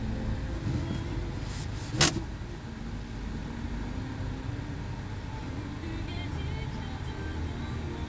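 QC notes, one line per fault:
No faults heard in this recording of sounds.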